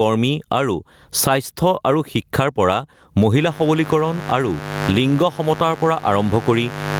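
Throughout the speech, the gain swings by around 20 dB; this gain pumping likely comes from an overdriven input and fast limiter. From 3.38 s to the end, a steady, raspy mains buzz sits roughly 15 dB below the speech, caused by switching spikes from the 50 Hz mains leaking in.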